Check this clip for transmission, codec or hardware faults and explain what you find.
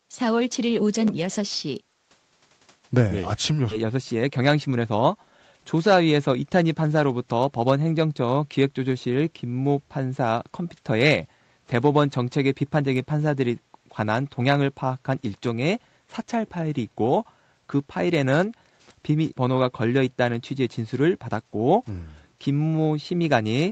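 Three faults are present: a skip ahead, a jitter buffer speed-up right after it, and a brief gating of the background by the echo canceller. The audio is band-limited at 8 kHz, as expected for an Opus call path.

Skip ahead, 3.71 to 3.73 s. About 0.7 s of speech is missing. A stretch of audio was dropped, likely by the jitter buffer when it had too much audio queued. Playback then joined the two sides directly. The speech jumps forward with no gap.

Jitter buffer speed-up, 3.83 to 5.53 s. The buffer was still holding more audio than its target. It cut many short pitch-period pieces to shrink the delay, removing roughly 0.2 s in total. The speech runs at 111% speed with unchanged pitch. It sounds hurried.

Background gated by the echo canceller, 18.73 to 18.85 s. The canceller judged that the loudspeaker was active and turned the microphone down hard. The room sound dips by about 10 dB for roughly 0.1 s. 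It returns once the canceller lets go.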